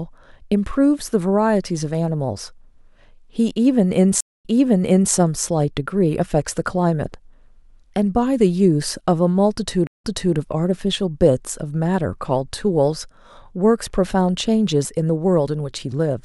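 Twice the connection to the server dropped and the player started a fresh decoder in mid-stream, a stream reconnect. Because the server resends a burst of recent audio, the speech does not pick up where it stopped. At 4.21 s it cuts to 0.23 s of silence and then resumes 0.70 s earlier, so a short stretch is heard again. The disturbance lasts until 5.13 s. At 9.87 s, 0.16 s of silence is followed by a 0.33 s jump back, which settles by 10.36 s.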